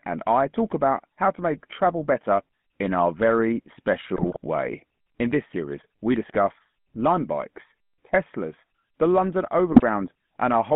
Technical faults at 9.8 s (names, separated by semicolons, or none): GSM full-rate codec; GSM bit errors